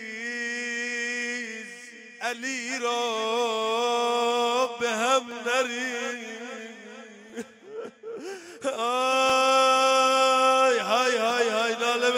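Periodic USB or driver dropouts run from 5.31 s to 11.31 s, recurring every 2.0 s, about four in all. At each one the interface or its driver appears to stall briefly, so a sliver of sound, roughly a couple of milliseconds, never arrives and is replaced by silence. Those tiny gaps break the waveform abruptly, producing evenly spaced ticks that stand out against the running sound.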